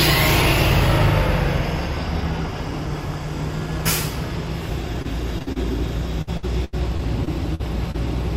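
From 5.02 to 5.58 s, then 6.22 to 7.96 s, there is repeated packet loss (robotic sound). Audio kept dropping out in short holes of up to 41 ms, then 81 ms. Each hole was patched by stretching the last sound, which leaves the audio choppy.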